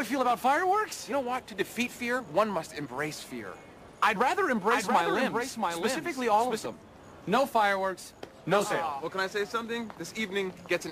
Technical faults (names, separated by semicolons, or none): doubled audio track